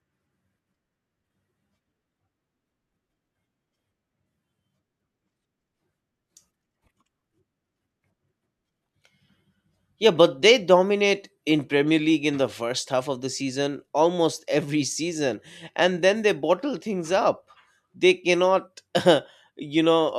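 No technical faults are audible.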